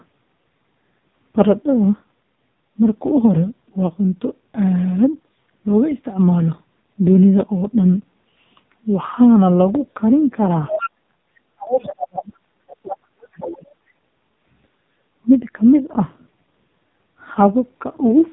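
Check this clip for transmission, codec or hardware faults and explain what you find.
Yes, there are three problems here: heavy low-rate mobile codec damage across the whole clip, and a cluster of echo-related trouble between about 10.7 and 13.8 s.

AMR narrowband mobile codec: Throughout, the speech is squeezed through AMR-NB, with nothing above 3.8 kHz. The voice model is short of bits, so the speech comes out buzzy and synthetic, which fits a low mode around 5.9 kbps. It's heavy damage, muffled and robotic.

Other side's voice leaking through: Faint scraps of a second voice appear at 10.67–10.90, 11.79–11.94, 12.18–12.22, 12.67–12.96 and 13.41–13.45 s, roughly 10 to 20 dB under the talker. The likely cause is loudspeaker playback the echo canceller didn't fully strip from the microphone.

Speech suppressed in double talk: From 11.50 to 12.32 s and again from 12.82 to 13.75 s, the talker's voice gets pushed right down, very nearly to silence at the deepest points. 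This likely happened because both sides talked at once and the echo canceller couldn't separate its own talker from the echo, so it ducked both.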